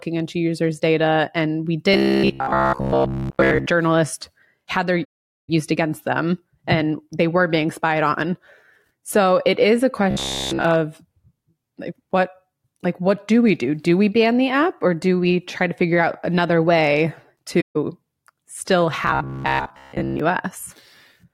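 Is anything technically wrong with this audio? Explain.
Yes. Speech here has two kinds of fault.

From 1.94 to 3.66 s, 10.11 to 10.65 s (after "it is a") and 19.03 to 20.20 s, the voice becomes a rigid metallic buzz at 66.7 Hz. This is robotic sound from repeated short buffers, likely one 15 ms chunk looping while new audio ran late. The first two stretches repeat throughout; the last is mostly repeated.

From 5.05 to 5.50 s, between "had their" and "against them and they", and for 0.15 s after "figure out another way" at 17.61 s, the sound fades into soft-edged silence. This is AAC frame loss with muting: the decoder zeroed missing frames and overlapping windows smoothed the edges.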